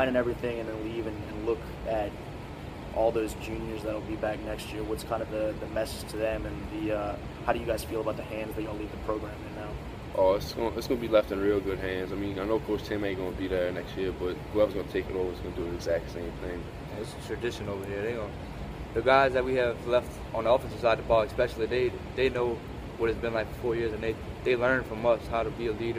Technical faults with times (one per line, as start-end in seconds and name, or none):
none